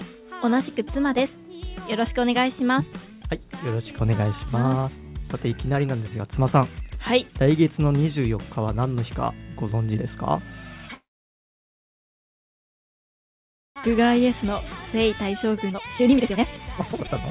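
The audio runs through a narrowband call path with nothing above 4 kHz, which fits G.711 A-law at 64 kbps. From 10.94 to 13.78 s there's a call audio freeze: the sound stops for roughly 2.8 s, nearly all of it silent, likely because packets got held up and the jitter buffer ran dry before playback picked up where it left off. Right after, at about 13.84 s, there's a skip ahead. Playback jumps forward with no real gap, dropping around a second and a half, because that stretch of audio was dropped on the way or by the jitter buffer when it overflowed. Then come two jitter buffer speed-ups where short pitch-period chunks get cut out so things play faster at the same pitch. From 13.98 to 14.46 s it's a gentle 106%, shaving off a few tens of milliseconds, just enough to sound a little hurried. From 14.96 to 17.12 s it pushes to 144% and trims roughly a second, so that stretch sounds clearly hurried as the buffer drains its backlog.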